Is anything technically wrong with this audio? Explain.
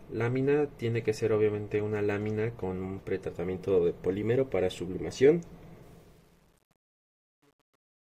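Yes. Truncation distortion on a fade, from 5.83 s to the end at 8.02 s: the fade-out, starting around 5.83 s, is rounded to few bits without dither, consistent with about 9-bit resolution. From 6.17 s the tail turns gritty.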